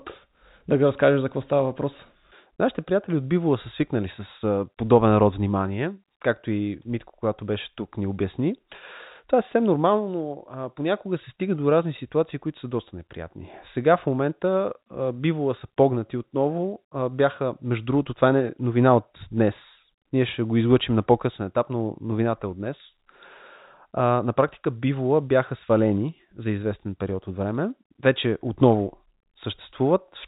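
At 9.52 s, just before "нормално но а понякога", there are bit errors on a digital phone line. A few flipped bits at a very low error rate corrupt single samples in the G.711 telephone coding, whose 4 kHz band limit is audible throughout, producing a brief tick. It shows as an isolated spike in the waveform and a thin vertical broadband line on a spectrogram.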